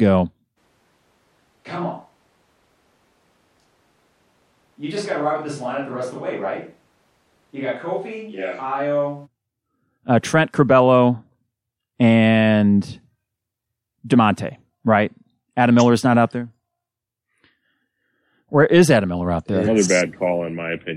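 A switch to a distant microphone runs from 0.59 s to 9.25 s in this speech clip. The voice abruptly turns roomy and hollow with thinner bass, drops roughly 10 dB, and room noise rises to about 35 dB below the speech. The cause is likely a failed close microphone.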